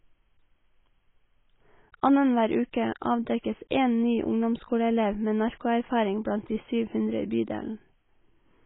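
From start to finish the speech sounds dull and smeared with a watery, warbling texture. This is likely heavy AAC compression at a very low bitrate, consistent with about 16 kbps. A spectrogram shows nothing above 3.8 kHz.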